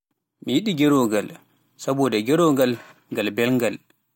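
No technical faults heard anywhere in the speech recording.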